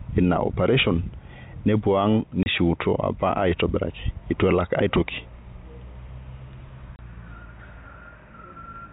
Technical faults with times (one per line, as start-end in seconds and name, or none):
2.43-2.46 packet loss filled with silence
6.96-6.99 packet loss filled with silence